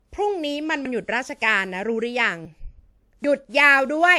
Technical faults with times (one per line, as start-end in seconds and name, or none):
0.00-4.19 generation loss
0.85 dropped buffer (overrun)
2.45 dropped buffer (overrun)
3.24 dropped buffer (overrun)